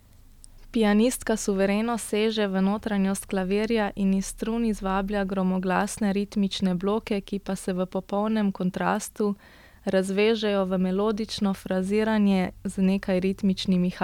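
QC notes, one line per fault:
No faults to note in this speech.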